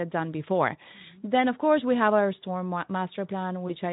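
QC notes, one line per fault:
3.67 to 3.75 s, VoIP packet loss concealed by the speech codec: a single lost 20 ms frame is bridged by the decoder repeating its last pitch and filter at falling gain, so there is a brief stretched, fading sound rather than silence. Since each frame builds on the previous one, the sound stays weak for tens of milliseconds after packets return. That lingering tail and the absence of a gap or click set it apart from a plain dropout.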